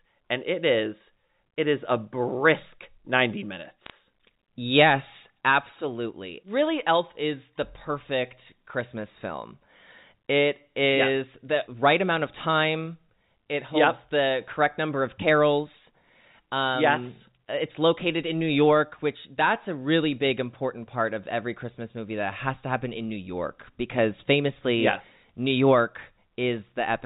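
At 3.86 s, right after "is a brisk ninety", a short burst of bit errors on a digital phone line lasts until about 3.90 s. Flipped bits in the G.711 mu-law stream, roughly one in every five hundred across what sounds like a few frames, each corrupt a single sample, producing sharp ticks and brief crackle. Unlike packet loss, nothing drops out or gets concealed. The band-limited telephone speech carries on intact beneath the clicks.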